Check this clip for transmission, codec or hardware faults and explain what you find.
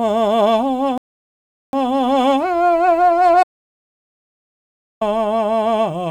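Two faults interrupt the music, one from playback delivery and one from a lost input.

A rebuffering stall runs from 0.98 s to 1.73 s. The player drained its store of downloaded audio and halted while waiting for more data. The music drops to silence for about 0.75 s. It then picks up at exactly the point where it stopped. Nothing is missing from the music. The pause simply adds 0.75 s to the running time.

An audio dropout to silence follows from 3.43 s to 5.01 s. The music cuts out mid-flow and returns mid-flow after about 1.58 s. The gap is silent, with no background tone underneath. The likely cause is a lost input signal, such as a disconnected device, a failed link or an unintended mute, while recording carried on writing silence. Unlike the stall, this gap removes material. Whatever played during those 1.58 s is gone.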